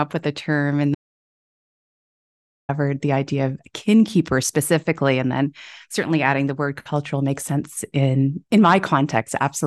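Right after "with the term in," at about 0.95 s, the speech drops out to dead silence and stays gone until 2.69 s, where it picks up again on "the idea of kin." That's roughly 1.74 s of nothing at all, not even room tone, so the signal was likely cut upstream, say a lost connection or a mute, while recording carried on writing silence. Whatever was said in that stretch is simply missing.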